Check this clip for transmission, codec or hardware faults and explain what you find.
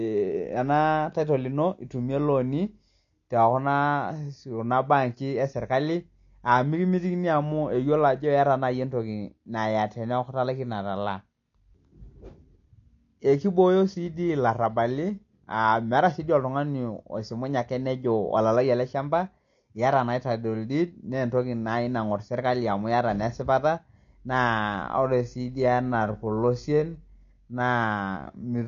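Two faults are audible in this speech: codec damage across the whole clip and a slowed section at the end.

AAC compression degrades the entire clip, likely from AAC-LC at a low rate, which fits roughly 32 kbps. The coder discards content above 7 kHz and coarsely quantises what remains, so sibilants sound fizzy and dull. A spectrogram shows a hard ceiling at 7 kHz with patchy gaps beneath it.

A time-stretched section runs from 24.38 s, just after "amu iata naa esipata", to the end of the clip, likely from software slowing it to about 0.71× speed while holding pitch by repeating short pieces. The sound turns drawn-out and drags. The waveform shows stretched syllables.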